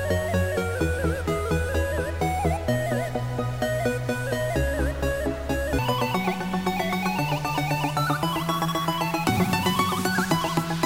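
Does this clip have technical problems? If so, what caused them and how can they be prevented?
Yes. From 5.79 s to the end, a section plays at the wrong speed: it runs 1.8 times too fast, so pitch rises by roughly ten semitones and the sound turns high and hurried. The likely cause is resampling or playback against a mismatched clock rate. Prevent it by verifying sample-rate and clock settings match at every import, edit and playback stage.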